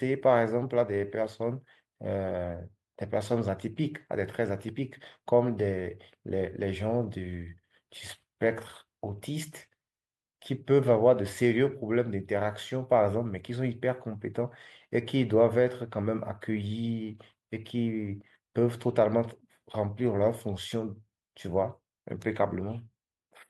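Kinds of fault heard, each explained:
No kinds of fault are heard in this clip.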